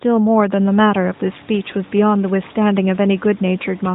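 No technical faults can be heard in the recording. Room noise rises by about 17 dB at around half a second and then sits about 26 dB below the speech, while the AMR narrowband mobile codec keeps everything under 4 kHz, giving the narrow, phone-like sound of a mobile call.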